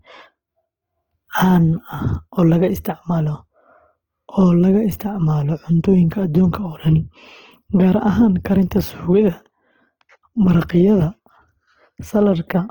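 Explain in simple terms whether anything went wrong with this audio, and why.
From start to finish, the speech sounds rough and grainy, with a hiss-like texture over it. That points to likely Opus compression squeezed hard: when data runs short, the encoder fills missing detail with noise or copied lower sound, so clarity turns coarse.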